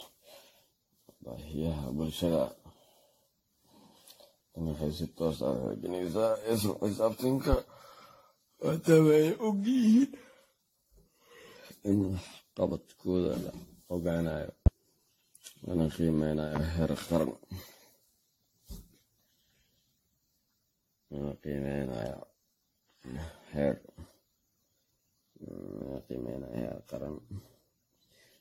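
From the start the speech has a swirly, hollow, smeared quality, with consonant attacks going soft and nothing above about 16.6 kHz. That's generation loss, likely from the audio being run through an AAC-LC encoder at 64 kbit/s something like ten times over. Each re-encode quantises on a shifted frame grid, so the noise and spectral gaps keep piling up, and it ends up sounding worse than 64 kbit/s on its own would.

At 14.66 s, right after "la ogaanayo", there's a loud pop lasting about 33 ms and sitting about 20 dB above the speech, which carries on underneath it. A second, softer pop follows at 16.56 s, again about 33 ms and about 15 dB up. Both are sharp single clicks, likely from a brief voltage spike such as static, a switch or a driver glitch getting into the signal path.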